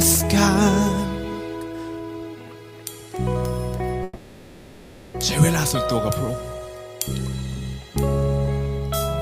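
A call audio freeze hits at 4.03 s and holds until 5.16 s: the sound stops moving forward and the last bit gets smeared out as a fading buzz or hiss for about 1.1 s, then the audio picks up exactly where it left off. Nothing is lost, but everything after that point runs about 1.1 s late. Likely cause is packets stalling in transit so the jitter buffer drained and the receiver padded the gap.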